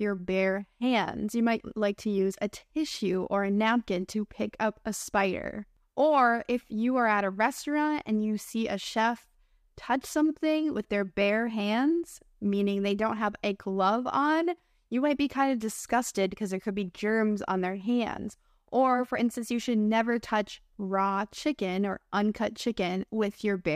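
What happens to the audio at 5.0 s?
Nothing goes wrong at 5.0 s; the speech carries on intact through that moment, with no dropout, click or distortion to be heard.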